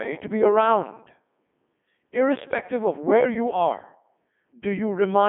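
Throughout, the speech carries Codec 2 vocoder damage. The voice is resynthesised from sine waves using only pitch, voicing and envelope, so it sounds heavily robotic and buzzy, which fits a 3.2 kbit/s stream. A spectrogram shows smooth harmonic stripes between 200 Hz and 3.5 kHz, with nothing above 3.7 kHz.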